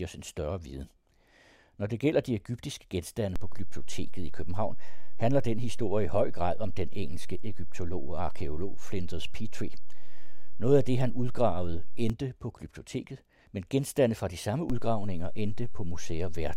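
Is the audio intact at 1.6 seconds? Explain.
Yes, the audio is intact at 1.6 seconds, with no dropout, click, distortion or other fault audible at that moment.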